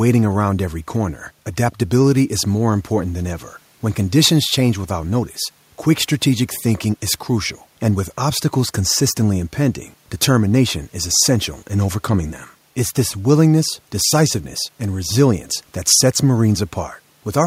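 A recording of speech in which no technical fault can be heard anywhere in the signal.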